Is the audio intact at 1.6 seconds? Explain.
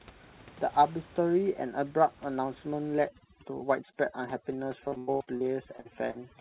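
Yes, the speech at 1.6 seconds is intact, with no fault at that moment.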